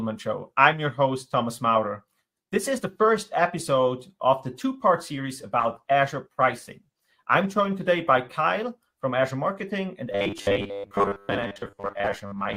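From 5.62 to 9.43 s a call bitrate drop cuts the encoder from 64 to 24 kbps, bottoming out for about 2 s, so the sound turns coarser and duller. From 10.12 s to the end, robotic sound from repeated short buffers, likely caused by late audio being filled by repeating a 10 ms chunk for most of the time, gives a rigid 100 Hz metallic buzz.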